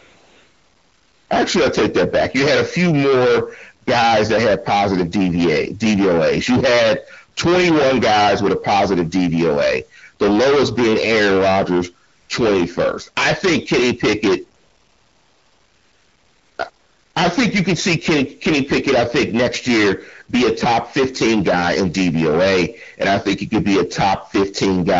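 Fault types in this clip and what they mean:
Hard clipping: The speech is driven about 28 dB past full scale, so nearly a third of the waveform is sliced flat, giving a harsh fuzz throughout.
AMR comfort noise: When the phone decides nobody's talking, the real background drops out and smooth synthetic hiss fills in, at the start and around 14.6 to 17.2 s.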